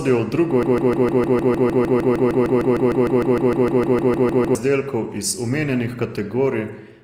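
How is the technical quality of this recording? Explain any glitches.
The technical quality is poor. The speech is degraded by lossy compression throughout, and a long section is stuck in a repeating loop.

From 0.63 s to 4.55 s there is a broken-record loop. Right after "v drugo", a fragment of about 0.15 s repeats exactly, back to back, roughly 26 times. A stalled player, encoder or stream likely kept resending the last piece it held. The sound stutters mechanically. The speech meant for those four seconds never arrives.

Across the whole clip there is audible Opus compression. The likely cause is the codec's music mode at a low rate, fitting roughly 24 kbps. The full bandwidth is kept. But with few bits, the upper bands are filled by folding or noise rather than real detail. The voice sounds rough, grainy and noisy. There is little swirling.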